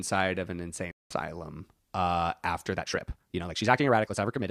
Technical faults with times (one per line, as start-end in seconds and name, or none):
0.91-1.17 stream reconnect
2.71-4.51 time-stretched section